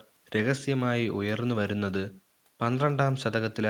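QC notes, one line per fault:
No technical faults are present, and the only background is the room's own noise, which sits about 41 dB below the speech.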